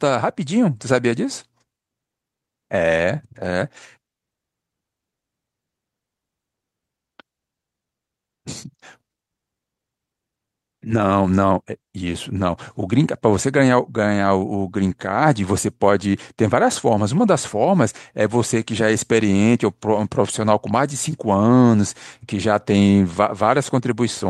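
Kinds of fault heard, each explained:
Skip ahead, 7.21 to 7.23 s: A stretch of speech, around 0.4 s of it, never reaches the listener. It was lost in transit or discarded by an overfull jitter buffer while newer audio was already queued. Nothing is inserted to cover the hole, so the speech on either side is spliced almost directly together and the talker seems to leap forward. That cuts the playback delay by roughly the same 0.4 s.
Jitter buffer speed-up, 7.31 to 9.25 s: Just after the jump, the receiver still holds more buffered speech than its target. It repeatedly trims tiny slices, each one or a few pitch periods long, to drain the backlog. Over these two seconds the speech plays at about 111% of normal rate with no change in pitch, sounding rushed. Altogether a fifth of a second or so is removed before the pace settles.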